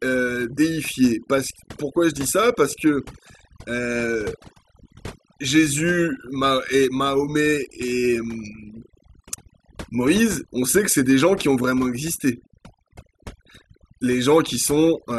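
Overdone noise removal runs throughout: an overly aggressive reducer gates bands near its noise estimate, leaving twinkling specks in near-silence and quiet parts of the speech stripped away.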